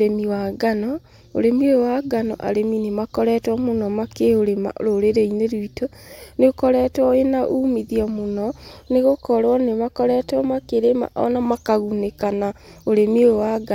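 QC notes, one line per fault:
No faults found.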